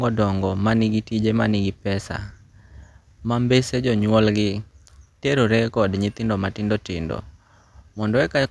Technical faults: none

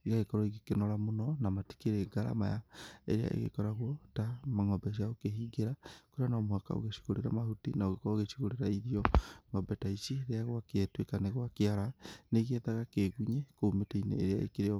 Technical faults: clock drift buffer slips

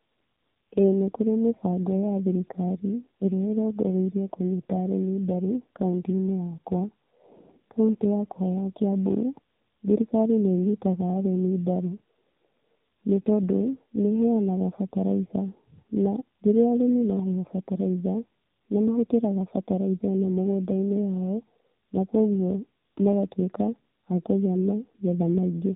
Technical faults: tandem speech coding

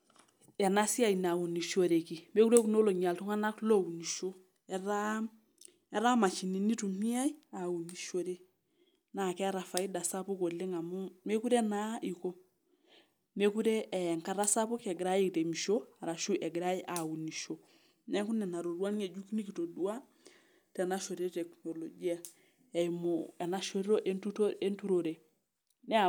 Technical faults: electrical switching spike

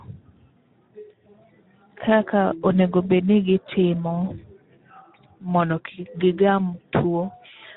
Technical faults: Speex codec

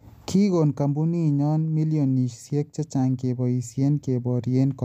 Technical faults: none

